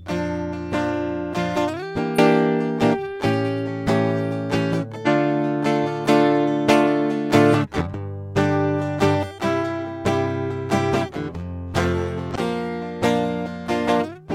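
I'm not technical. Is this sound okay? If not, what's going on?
No, not quite. This music has three brief glitches, at about 2.14 to 2.19 s, 5.02 to 5.08 s and 12.31 to 12.36 s, each a quick blip of roughly a twentieth of a second. That's damaged data in a compressed stream: a few bytes of the file got scrambled or lost, so the player couldn't make sense of that bit and had to hunt for the next clean spot before carrying on.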